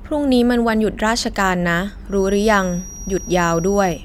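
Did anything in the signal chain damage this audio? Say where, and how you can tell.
Yes. From 2.05 s to the end of the clip, a feedback whistle sits under the speech. It is a thin, steady tone at 5.7 kHz, about 20 dB below the speech, and its level swells and fades slowly. The stage is likely the acoustic loop between a loudspeaker and the microphone. That loop is running right at the edge of feedback. One high frequency keeps circulating and sustaining itself, but it never builds into a runaway howl.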